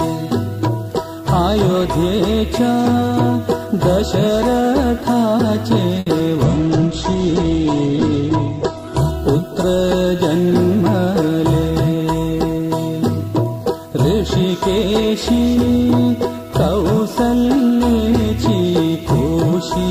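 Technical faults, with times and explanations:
6.0–6.08 s: short stall from a late packet. A packet arrived late and the jitter buffer ran dry. The receiver held the last sound for about 70 ms until the packet came, then carried on from the same point. Nothing is lost. The sound is simply stretched, with a brief buzz or dip where it hangs. The playback delay grows by those 70 ms from here on.
6.18–6.21 s: short concealed packet loss. About 20 ms of audio never reached the decoder in time. The receiver covered the gap by extending the last sound, following its pitch if voiced and using shaped noise if not, then blended back into the real audio. About 10 ms of that fill can be heard. The result is a quick smear or wobble, and a brief sound inside the gap may vanish.
6.45–10.85 s: call bitrate drop. The bandwidth estimate fell, and the encoder was pushed from 64 kbps down to 9 kbps. It held the lowest rate for about 2.1 s. 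At that rate Opus codes coarsely and trims the top end, here from 20 kHz down to 8 kHz. So the sound turns rough, watery and muffled. It clears again as the rate recovers near 10.85 s.
11.07–11.72 s: jitter buffer speed-up. The buffer held more audio than its target, so the receiver cut short pitch-period slices, many times in a row. Roughly 50 ms was removed over this stretch. Playback ran at about 107% speed with the pitch unchanged. That is past the point where it sounds hurried, so this passage feels rushed before normal pace returns.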